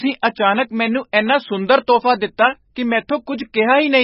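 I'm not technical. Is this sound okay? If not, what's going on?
No. The speech was squeezed into far too little data, likely by MP3 compression, for the whole clip. Nothing above 5.6 kHz survives, so it sounds dull and muffled, with a watery, swirling quality and smeared, chirpy s sounds.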